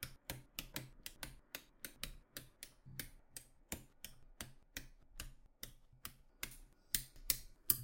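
From 6.51 s to the end at 7.84 s, pre-emphasis is left on: a 75 µs FM-style treble boost was never undone by the matching de-emphasis, leaving 10 kHz about 14 dB hot relative to 1 kHz. The sound turns thin, bright and harshly sibilant.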